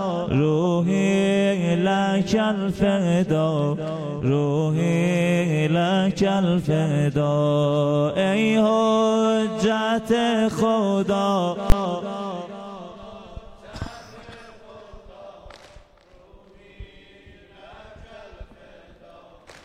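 A single hard bang cuts through the audio at 11.70 to 11.72 s, far louder than anything around it. It comes from invalid numbers at full scale: a calculation returned infinite or invalid values, which were clamped to the largest positive or negative sample. The output was then pinned at one extreme value for a 20 ms block, too short to separate into two distinct pops, so it lands as one loud burst.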